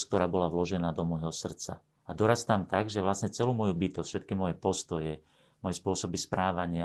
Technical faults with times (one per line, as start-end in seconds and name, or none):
none